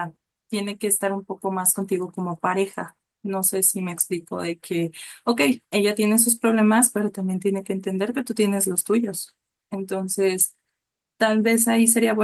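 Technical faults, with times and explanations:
Nothing stood out as a technical problem on listening to this speech recording.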